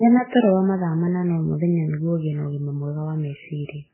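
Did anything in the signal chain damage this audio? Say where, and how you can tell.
Yes, at the codec stage, throughout the speech: the artefacts suggest transcoding between lossy codecs, likely a very low-bitrate MP3 re-encoded through WMA and then Vorbis. A spectrogram shows nothing above 3 kHz, while the different codecs' artefacts layer together, each encoder compounding the last.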